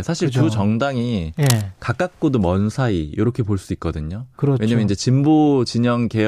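A worn cable or connector likely shifts at 1.37–1.63 s, adding cable scratch noise: uneven rustling bursts around 10 dB below the speech.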